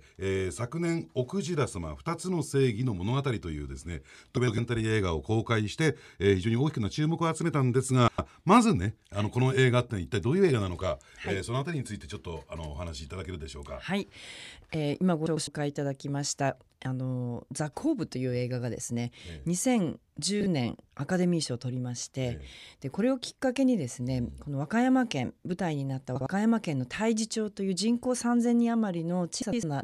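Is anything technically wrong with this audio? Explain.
Yes. Frames out of order at 4.37–4.58, 8.08–8.29, 15.26–15.47, 20.41–20.46, 26.16–26.27 and 29.42–29.63 s. In each, two adjacent blocks of speech, about 104.5 ms each (52.2 ms at 26.16 s, 26.1 ms at 20.41 s), play in swapped order. The result is a brief garbled flutter, and no time is lost.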